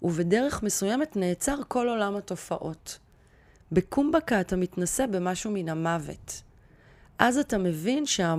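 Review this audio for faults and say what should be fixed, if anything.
Nothing needs fixing; no faults were found.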